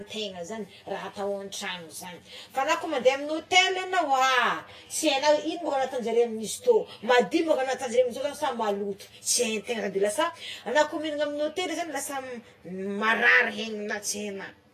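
From start to finish, the speech carries channel delay (comb filtering). One channel runs roughly 10 ms behind the other, and the two are folded to mono. Wherever the shared sound arrives out of phase, it cancels. The first notch sits near 50 Hz. Further notches repeat at even steps of about 100 Hz up the spectrum. The result is a hollow, phasey tone, as if spoken down a tube.

Over the whole clip there is also plainly audible codec damage, likely from Vorbis compression. Nothing remains above 14.2 kHz. The treble is coded too coarsely to keep its fine detail, which is replaced by noise of similar energy. Sibilants turn hissy and grainy. Consonant attacks smear. The harshness points to a low bitrate, around 30 kbps.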